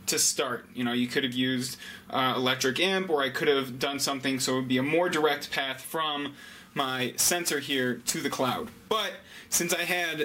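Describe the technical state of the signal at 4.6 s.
At 4.6 s the signal is intact, with no audible dropout, distortion, clipping or other fault at that point.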